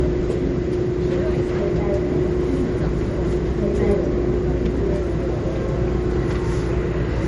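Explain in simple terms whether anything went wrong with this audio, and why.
The whole clip stops dead at 11.1 kHz and sounds dull. That's likely low-bitrate audio saved at a high bitrate, which can't restore the lost detail.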